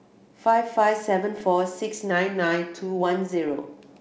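Pops and rough, grainy bursts with brief level jumps at 1.38 to 1.42 s and again at 3.49 to 3.64 s are bit errors on an ADPCM link. Flipped bits, roughly half a percent in the first burst and fewer in the second, knock the decoder's step size and predictor off track, so each hit rings on briefly. From 2.11 to 3.03 s the speech slows by about 6% and drops about a semitone (107 cents), then snaps back, likely a drift correction step resyncing two clocks. The wideband G.722 coding holds steady, in line with the 64 kbit/s mode.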